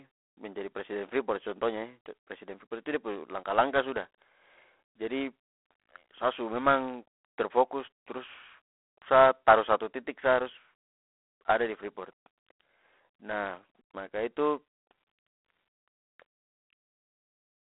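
From start to finish the speech carries G.726 ADPCM damage, a harsh, rasping hiss that rises and falls with the speech level, which fits the 24 kbit/s mode's coarse prediction error. A spectrogram shows a 250 Hz to 3.4 kHz telephone band, with nothing above 3.9 kHz.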